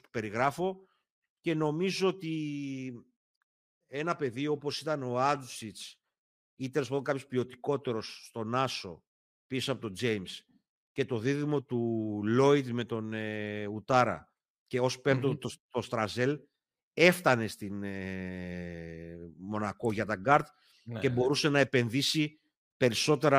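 Nothing stood out as a technical fault on listening to the speech in this recording.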